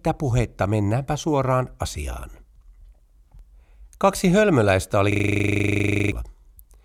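At 5.12 s the speech locks into a system hang loop that runs until 6.12 s. The same 40 ms fragment repeats exactly, about 25 times, at 25 Hz, producing a rough, rattling buzz. The loop points to a frozen computer or driver while the audio hardware kept replaying one ring buffer. About a second of speech is lost. Unlike a dropout or glitchy stutter, the repeats are identical and perfectly evenly spaced.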